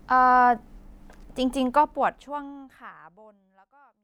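No technical faults are present in this speech recording, whose level eases down gradually from around a second and a half onward in an even, editor-style fade with no click or hard edge at the end.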